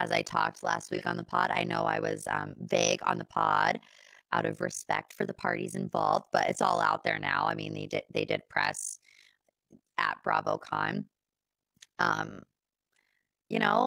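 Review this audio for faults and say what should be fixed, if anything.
Overlap-add ripple runs through the whole speech clip. The level pumps up and down around 50 times a second, with a depth of about 60 dB. That gives a harsh, robotic flutter. The analysis windows and their overlap do not sum to a constant gain, so each frame boundary dips. Use a window and hop size that satisfy constant overlap-add, and check that the synthesis gain is normalised.

An AAC frame loss with concealment sits between 0.95 and 1.02 s, after "i talked last" and before "on the pod i". About 42.7 ms is smeared and noisy. The decoder rebuilt that stretch from the previous spectrum. The length fits a single lost frame. Protect the AAC stream with retransmission or forward error correction so frames are not dropped.

A bit error spike hits at 7.51 s, between "all out there now" and "mean they did they". It is one sharp, broadband tick that has nothing to do with the speech around it. 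A flipped bit sent one or two sample values jumping by a power of two. Add checksums or error detection on the memory and digital links that carry the samples.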